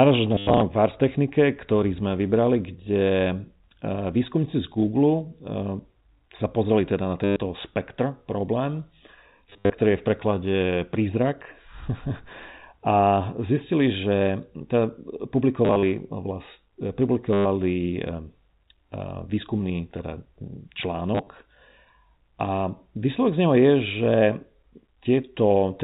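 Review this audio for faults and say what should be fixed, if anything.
Packet loss with the last packet repeated shows up at 0.35–0.61, 7.24–7.36, 9.5–9.72, 15.65–15.83, 17.33–17.45 and 21.15–21.27 s: the receiver replays stale audio, so you get robotic stutters buzzing around 100 Hz, which fits 10 ms packets. Add jitter buffering and proper concealment to fix it.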